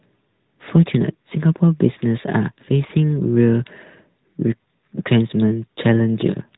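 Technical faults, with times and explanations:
Throughout: AMR narrowband mobile codec. The speech has plainly audible codec damage. Nothing reaches above about 3.8 kHz, so sibilants and breath lose their top and the voice sounds boxed in. The codec runs at 8 kHz and rebuilds each 20 ms frame from a vocal-tract model excited by a few pulses. That rebuilding gives a buzzy, synthetic edge. The damage points to a mid-range mode of around 10.2 kbps.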